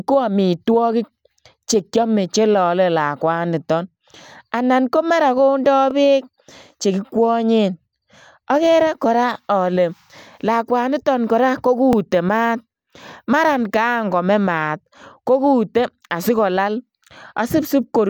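Overlapping chunks occur at 5.91 to 5.93 s, just before "beek chekikwanyeen", and again at 11.93 to 11.95 s. The speech was handled in 6-second chunks, each beginning before the previous one ended, so about 23 ms of audio replays at each join and is heard as a brief stutter.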